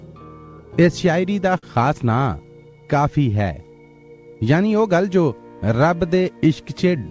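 At 1.58 s a sound hangs on for a moment too long, drawn out with a faint buzzy texture, before picking up again at 1.74 s exactly where it left off, with nothing skipped. This is a short stall from a late packet: the jitter buffer ran dry, so the receiver stretched the last sound by about 47 ms until the packet turned up. The G.722 call path, with nothing above 8 kHz, frames this stretch.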